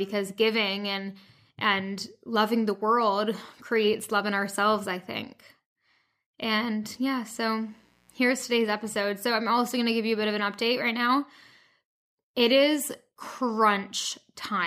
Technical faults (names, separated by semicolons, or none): mains buzz